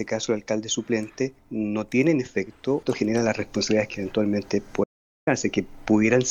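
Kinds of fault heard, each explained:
Audio dropout to silence: the input likely cut out briefly, leaving about 0.43 s of silence near 4.8 s, no room tone, then sound resumes abruptly.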